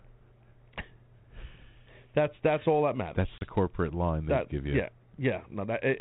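At 3.38 s there's packet loss on an ADPCM call. About 30 ms, a few packets' worth, drops to a hard-edged silence. The decoder's predictor and step size lose sync with the sender, so "corporate line they that" comes back briefly roughened, settling by 3.45 s.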